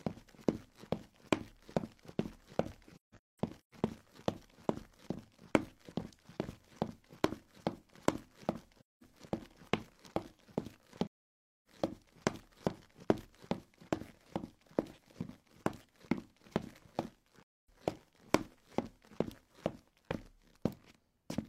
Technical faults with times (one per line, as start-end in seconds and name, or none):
2.96-3.74 AAC frame loss with muting
8.80-9.03 AAC frame loss with muting
11.07-11.67 AAC frame loss with muting
17.42-17.69 AAC frame loss with muting